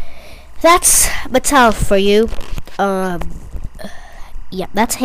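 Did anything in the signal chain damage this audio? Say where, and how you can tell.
Yes, there's timecode bleed coming in at the analogue wiring stage: a faint chirping warble sits under the sound for the whole clip, roughly 40 dB down. Linear timecode from a neighbouring cable leaked in, its square wave flipping between roughly 1 and 2 kHz at 24 frames per second.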